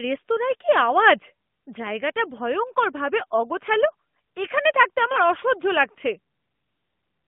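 At 5.12 to 5.17 s the speech dips and warbles: lost AMR speech frames. The decoder filled a corrupted frame by repeating the last good pitch and vocal tract settings at falling gain. Unlike a plain dropout, it never goes silent. The brevity fits one lost 20 ms frame.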